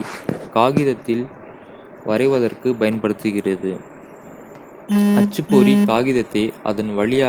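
Nothing goes wrong anywhere in this speech clip; the Opus voice compression working in its hybrid mode at 24 kbps leaves only a light touch on the sound.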